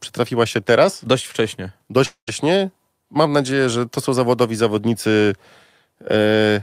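Speech, with one clear break from about 2.05 to 2.29 s that sounds like a long network dropout, likely packets that never arrived. Right at the gap the receiver keeps stretching the last bit of sound into a fading buzz, which collapses into roughly 100 ms of silence before the talker comes back. When the audio resumes, about 220 ms of the speech is simply gone, so the line jumps ahead rather than picking up where it stopped.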